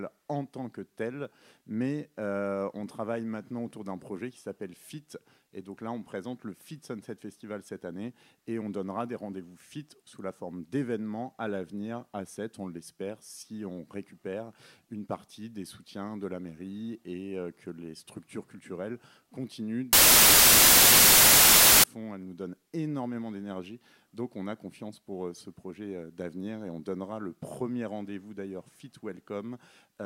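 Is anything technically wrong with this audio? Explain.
Yes. From 19.93 to 21.84 s, samples built from the wrong bytes: misassembled bytes promote noisy low bits to the top, producing loud, harsh broadband noise.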